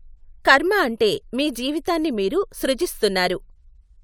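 No audible technical faults.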